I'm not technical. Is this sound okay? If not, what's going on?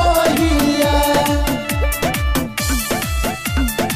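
Yes, this sound is okay, and there's nothing going on that needs fixing.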